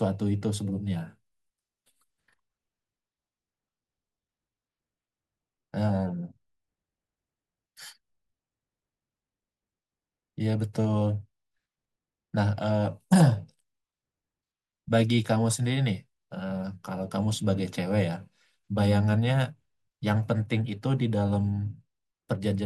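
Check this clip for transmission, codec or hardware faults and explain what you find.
No faults can be heard anywhere in this speech.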